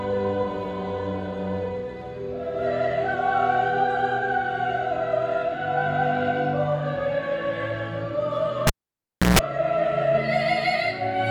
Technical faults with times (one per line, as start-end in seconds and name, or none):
8.67-9.39 cable pulled and plugged in